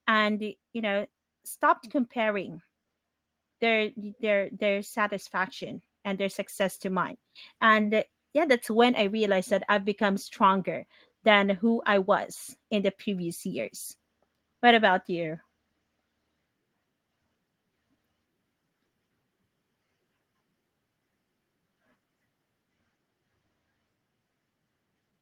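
From 0.72 s to 10.96 s, automatic gain rising lifts the level by about 6 dB as the gain control, judging the input too quiet, slowly turns itself up. Unlike a talker moving closer, the background noise swells along with the speech.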